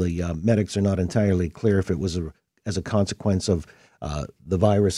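No technical faults are audible.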